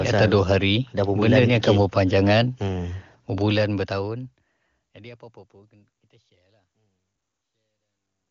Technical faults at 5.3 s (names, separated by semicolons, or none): none